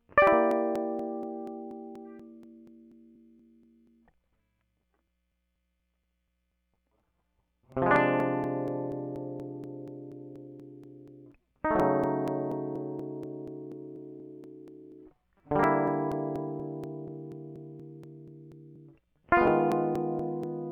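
From 0.27 s to 20.44 s, periodic USB or driver dropouts interrupt the music: something in the system stalls the USB bus or audio driver every 0.24 s, and roughly 10 ms of audio is skipped each time rather than filled. The signal jumps forward at each gap, around a hundred times, leaving a steady train of ticks or pops at about four per second, audible wherever the music is sounding.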